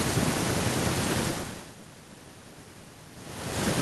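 No technical faults are audible in this speech recording.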